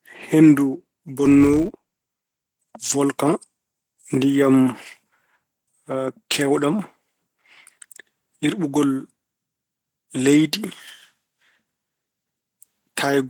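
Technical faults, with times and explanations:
Throughout: Opus compression, likely, at a low rate in hybrid mode. The speech turns grainy and hoarse, with some muffling from the speech layer, yet the bandwidth stays fullband. That fits roughly 16 kbps, which can't cover every band cleanly.
1.25 to 2.54 s: filter restarted on every block. A steady buzz near 188 Hz rides on the speech and tracks its loudness. Each block starts from a cleared filter state, so a small click lands at every boundary. That rate fits 256-sample blocks.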